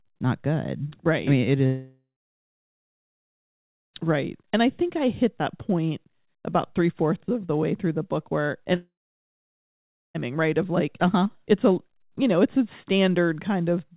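After "I mean it", from 1.66 to 3.95 s, and after "through the book where", from 8.75 to 10.16 s, the sound fades into a brief buzz and then goes silent before resuming further on with a piece missing. This is a long network dropout, likely caused by packets that never arrived. The receiver concealed the gap briefly before falling silent. Throughout the clip, nothing is heard above 4 kHz, which fits a narrowband call codec.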